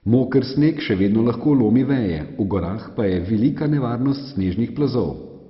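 MP2 compression runs through the whole of this speech clip. The sound is dull, with nothing above 5.6 kHz, and carries a gurgling, granular roughness. The likely cause is MPEG Layer II coding with far too few bits, which fits a rate of around 32 kbps. Starved of bits, the encoder shuts off its upper sub-bands entirely and quantises the remaining ones coarsely, so bands flicker in and out and the damage is heavy.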